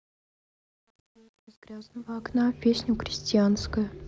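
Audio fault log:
0.00–2.45 s, truncation distortion on a fade: the speech fades in from the very start, and the level ramp itself is smooth, but the quiet part sounds gritty, worst up to about 2.02 s. The gain stage is rounding the signal to too few steps without dither, which fits roughly 9-bit resolution, so low-level speech collapses into coarse square-ish steps until the level climbs clear.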